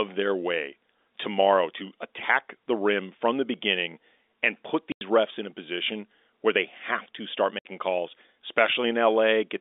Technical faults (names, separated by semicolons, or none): packet loss filled with silence